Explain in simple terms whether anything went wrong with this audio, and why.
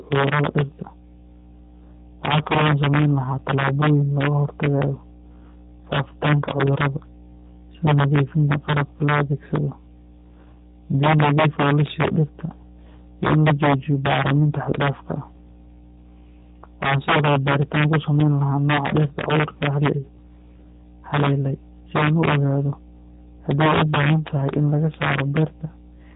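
Three problems run through the whole recording.

A mains hum sits underneath the speech: a steady low drone at 60 Hz from the electricity supply. It likely leaked in through a ground loop or a nearby transformer, and it stays fairly prominent even when the talker pauses.

There is also integer overflow. The signal was pushed well past its limit, and instead of being capped, the loudest peaks wrapped around to the opposite extreme. This happens only on a small fraction of the loudest moments, and each one produces a harsh crack, sharper than ordinary distortion.

Finally, the speech went through the G.729 codec, a low-rate phone-call format. It rebuilds the voice from a simplified model, so nothing above about 3.8 kHz survives. The speech sounds muffled, slightly rough and synthetic.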